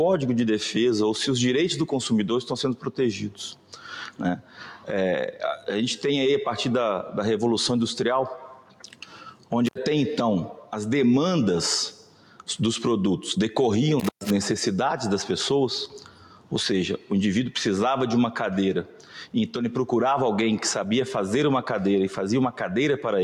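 A speech-tuned noise suppressor has been left running on this sound. It reads steady tones and decaying tails as noise and pulls them down by about 10 dB, so the level pumps and thins while sharp attacks pass through. The sound is cut by the noise suppressor at eight points: 2.76–2.94, 3.55–3.85, 4.1–4.89, 8.38–9.51, 10.56–10.73, 11.93–12.48, 15.87–16.52 and 18.84–19.34 s. Each is a dip of about 12 dB, except the one at 10.56 s, which is about 8 dB. Held and fading parts sink there. An intermittent contact breaks the signal twice, at 9.66–9.78 s and 13.99–14.30 s. A loose plug or cable opens briefly, and the sound drops out for about 70 ms and then about 120 ms. Crackle marks the edges of each gap, and faint hiss remains inside.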